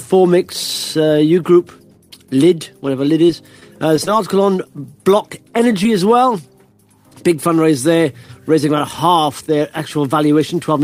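Between 2.91 and 4.08 s the audio carries scattered short gaps: about five tiny dropouts, none longer than roughly 10 ms and about 30 ms missing in all. Each is patched by extending the preceding sound, so only around four percent of that stretch is synthetic, heard as a cluster of brief ticks and hiccups. That clustering sets it apart from the isolated losses that follow. Short concealed packet loss then occurs at 4.83 s and again from 5.84 to 5.86 s, each time with 10 ms of audio missing. The receiver bridges the hole by continuing the last waveform, about 7 ms and 10 ms of fill respectively, before crossfading back into the real signal. Each is a single brief smear or tick standing alone, unlike the denser burst earlier, and unlike a plain dropout it leaves no hard cut to silence.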